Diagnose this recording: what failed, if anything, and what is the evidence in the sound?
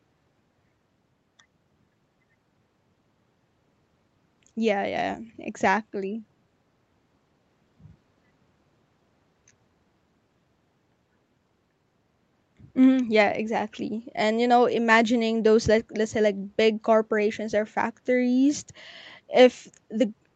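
Nothing failed in this speech recording, and no stage from capture through to playback leaves a mark that points to a fault. What the call path does is audible as intended: the top end stops at about 8 kHz, which fits microphone processing and an Opus call codec running at around 32 kbps.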